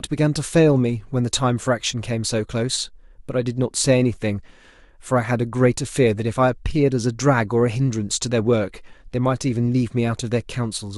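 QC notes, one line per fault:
No technical faults were found; the speech signal holds steady across the whole recording.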